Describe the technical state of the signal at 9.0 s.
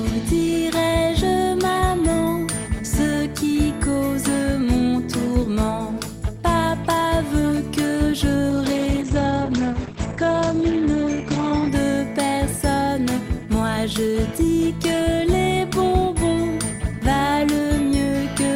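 At 9.0 s the signal is inside a call bitrate drop that runs from 8.5 s to about 11.77 s. The encoder has been starved of bits, so the sound is coded coarsely and turns rough and watery, and the top end is cut off above 8 kHz instead of reaching 20 kHz. This fits a fall from roughly 40 to 10 kbps. Unlike packet loss, there are no gaps or glitches, only a steady, muffled degradation until the rate recovers.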